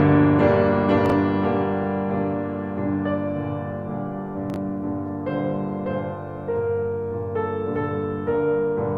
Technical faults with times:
1.06-1.12 chunks out of order
4.50-4.56 chunks out of order

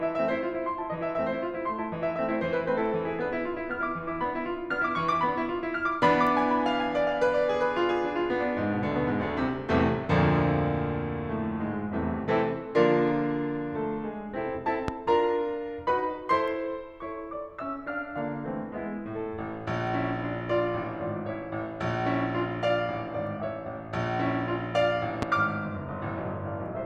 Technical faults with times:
14.88-14.91 loud pop
25.22-25.25 loud pop

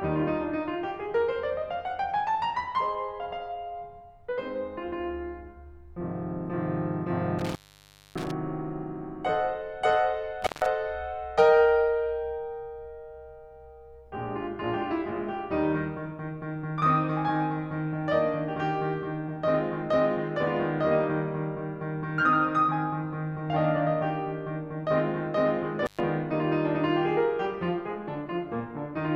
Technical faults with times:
7.39-8.31 intermittent contact
10.42-10.66 intermittent contact
25.85-26.00 intermittent contact

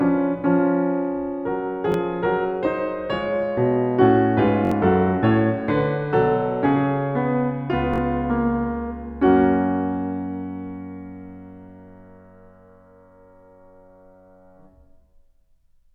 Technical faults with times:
1.92-1.94 repeated buffer
4.65-4.71 repeated buffer
7.94-7.98 repeated buffer

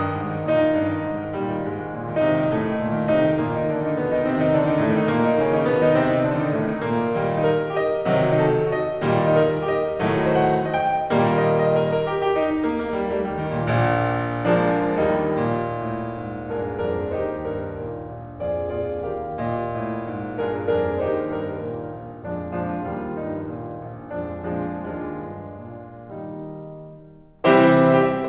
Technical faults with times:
none

